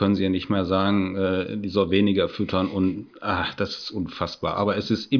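Nothing technically wrong turns up anywhere in this bit of speech, so there's no fault to point to and no time or cause to give.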